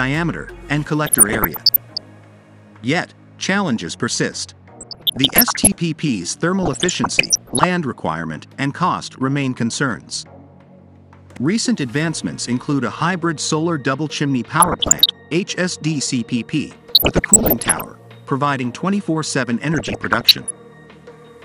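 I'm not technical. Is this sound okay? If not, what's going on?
No. DAB burbling at 1.06–2.06, 4.76–5.73, 6.63–7.64, 14.60–15.10, 16.88–17.88 and 19.74–20.51 s: weak digital radio reception corrupted the data, causing short blips of noise.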